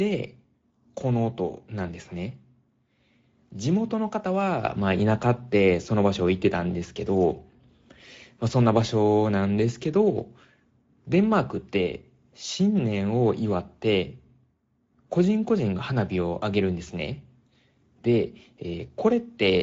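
The whole speech clip carries Speex codec damage: hoarse, noisy CELP coding that fits a bitrate around 16.8 kbps, with nothing above 7.7 kHz.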